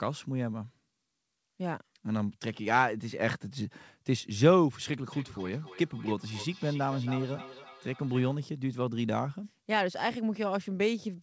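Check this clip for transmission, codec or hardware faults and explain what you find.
There's one real problem here, a feedback echo between two devices from 5.12 to 8.4 s. A second device in the room replays the sound into the mic, which the canceller can't catch, so it loops back roughly every third of a second at about −16 dB, thinner each pass. The top end stopping at 8 kHz fits a wideband call codec like G.722 and isn't a fault.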